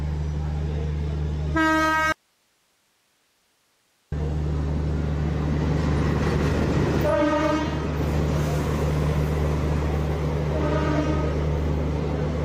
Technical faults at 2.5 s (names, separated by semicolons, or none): audio dropout to a faint residue